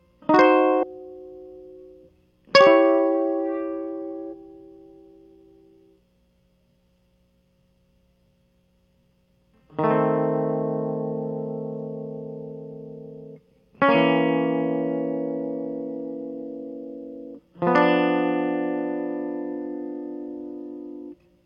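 At 0.79 to 0.84 s, 4.29 to 4.34 s and 17.34 to 17.40 s the music is broken by brief bursts of damaged data in a compressed stream, each lasting about 50 ms. Corrupted bytes in the encoded file leave the decoder unable to interpret those frames correctly, so it loses sync and hunts for the next valid frame header. Each event comes through as a short chirp, squawk, click or hole cutting across the music.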